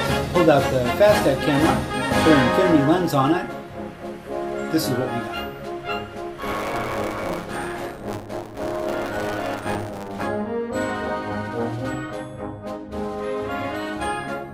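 From 6.37 s to 10.24 s there is buffer tearing, heard as a steady robotic buzz at 100 Hz whenever sound is present. Writer and reader of the ring buffer have drifted into each other, so roughly a third of each period replays audio about 40 ms old, joined by hard edges.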